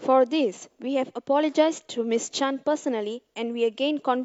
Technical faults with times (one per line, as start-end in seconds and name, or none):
none